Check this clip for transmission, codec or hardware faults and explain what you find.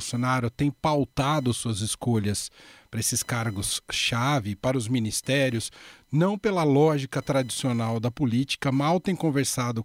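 There's one hardware fault, and it runs through the whole clip: computer activity noise. Under the speech there's a thin, whiny buzz pulsing at around 1 kHz, sitting roughly 35 dB below the voice. It rises and falls with what the machine is doing rather than with the talking. That's the processor or graphics load pulling on the ground shared with the audio circuit, so the interface picks up the computer's electrical chatter.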